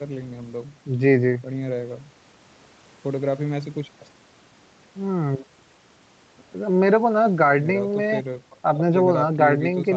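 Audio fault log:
No faults heard anywhere in this speech recording.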